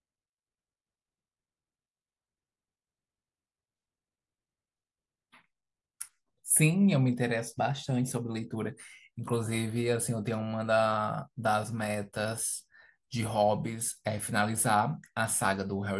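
No technical faults can be heard in the speech recording. Nothing in the audio stands out as a defect at any point.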